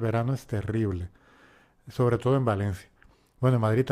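No technical faults can be heard anywhere in the speech.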